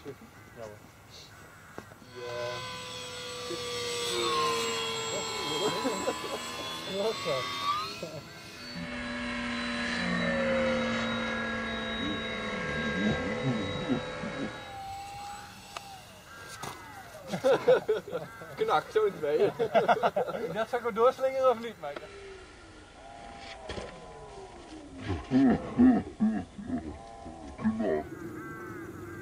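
No technical faults can be heard anywhere in the audio, and the signal holds steady with nothing disturbing it at any point.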